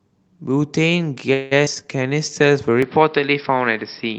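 At 1.33 s the speech stalls for about 0.2 s, to 1.53 s. This sounds like a call audio freeze, likely from packets held up until the jitter buffer ran empty. The last sound is stretched into a fading buzz, so a spectrogram shows smeared, blurred partials. Nothing is lost, and the audio resumes exactly where it stopped.

At 1.65 s a skip ahead follows. Roughly 70 ms of speech is dropped and the two sides are joined with only a brief 13 ms bridge. The waveform shows an abrupt splice, and the sound jumps forward with a small piece missing.

From 1.75 s to 2.35 s a jitter buffer slow-down adds 85 ms. Repeated pitch periods bring playback to about 87% speed while the pitch stays the same. Sounds are drawn out, and a spectrogram shows formants stretched sideways with regular, duplicated cycles in the waveform.

From 2.83 s to the end, the input switched to a poorer device, likely a lower-quality microphone or headset profile. 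Nothing above 5.5 kHz remains, so the spectrogram is sharply cut off there. New background noise sits about 30 dB below the speech, and the tone turns duller at much the same level with no gap at the switch.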